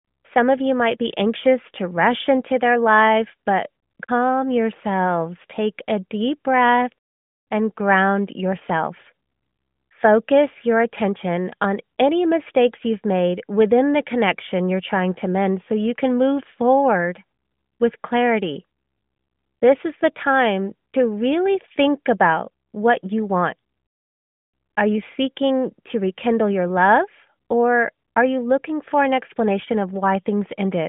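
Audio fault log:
No faults found in this speech recording, which is carried over a narrowband mobile line with nothing audible above about 3.7 kHz.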